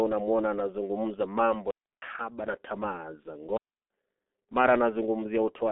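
G.723.1 codec damage runs through the whole recording and is heavy. The speech sits inside a narrow telephone band of roughly 250 Hz to 3.4 kHz, so it sounds muffled and thin, and the codec's slowly updated voice model leaves a hoarse edge and smeared consonants. That coarse rendering fits a bitrate near 6.3 kbit/s, where each 30 ms frame carries only a rough sketch of the voice.

A digital wireless dropout cuts the sound from 1.71 to 2.02 s, about 317 ms, ending just before "na tamaa za". A second dropout runs from 3.57 to 3.91 s, about 335 ms, right after "na tamaa za". Each time the receiver loses too much of the link's data, mutes with a very quick fade, and leaves a clean gap of near silence with no crackle or noise burst on either side.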